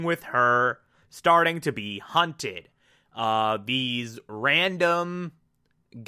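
No technical faults are audible anywhere in the speech recording.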